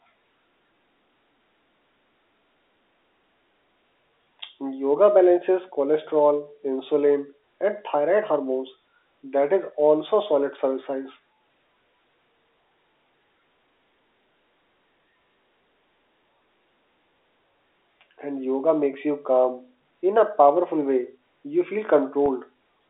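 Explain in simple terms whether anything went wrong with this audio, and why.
Near the very end, from 22.26 to 22.28 s, there is a packet loss with pitch repetition. About 20 ms of the speech went missing, which fits a single lost packet, and the receiver filled the hole by repeating the last stretch of pitch. That produces a brief held, slightly buzzy sound instead of a silent gap or a click, which is how it differs from a plain dropout. The telephone-band sound throughout comes from normal phone-line coding.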